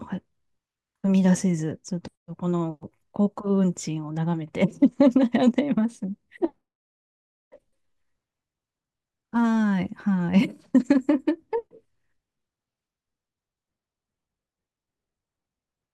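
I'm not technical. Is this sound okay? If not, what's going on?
Yes, this recording sounds fine. Nothing in the speech stood out as a problem, so there is nothing to fix.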